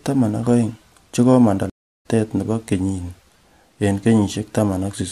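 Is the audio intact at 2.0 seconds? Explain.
No. At 2.0 seconds the speech is inside a stream reconnect gap running from 1.70 to 2.06 s. After "ak aeng che komanda" the connection drops, the player goes silent for about 0.35 s, then reconnects and starts a new decoder in mid-stream. When the audio returns with "nebo kenyini" it has jumped roughly 0.3 s ahead and fades in briefly. A simple dropout would resume exactly where it stopped, but here part of the speech is skipped.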